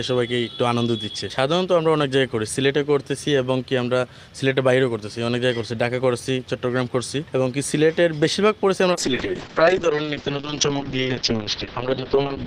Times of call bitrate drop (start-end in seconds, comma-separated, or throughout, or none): 8.92-12.46